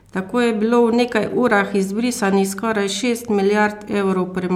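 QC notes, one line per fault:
No faults found in this speech recording.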